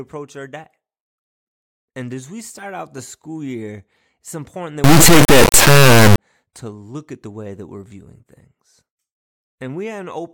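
Right after "year it's important that", from about 4.84 to 6.18 s, the speech turns into a harsh, extremely loud buzzing square wave, and it clears before "to look at the". That's integer read as float: the sample bits are being treated as floating-point values, which fits 32-bit integer data read as 32-bit float. Most values end up either near zero or wildly past full scale, so the output just slams between silence and the clipping limit.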